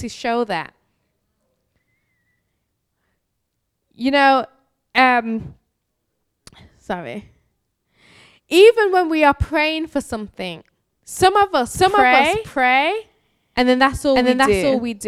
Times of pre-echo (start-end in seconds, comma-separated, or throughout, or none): none